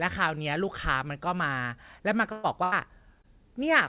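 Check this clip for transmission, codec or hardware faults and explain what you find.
Two kinds of transmission fault are audible, both from packets lost in the network. The band stops near 4 kHz, which points to a G.711 A-law call path at 64 kbps.

Burst of packet loss, 2.32 to 2.46 s and 2.64 to 2.74 s: consecutive packets never arrived, so the receiver stretched the last sound and let it fade, about 116 ms and then 81 ms. Each spot becomes a held buzz where the sound was voiced and a fading hiss where it was not, and the speech jumps ahead where roughly 120 ms and 80 ms went missing.

Short concealed packet loss, 3.22 to 3.26 s: about 20 ms failed to reach the decoder in time. The receiver patched roughly 18 ms by continuing the preceding sound and blending back into the real signal, leaving a brief smear or wobble in the speech.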